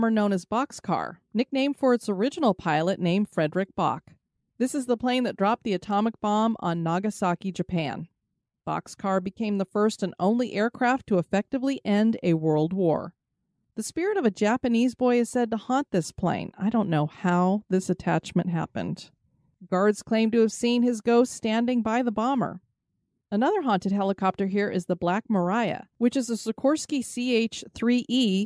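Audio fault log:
No technical faults are audible anywhere in this speech recording, and the signal holds steady throughout.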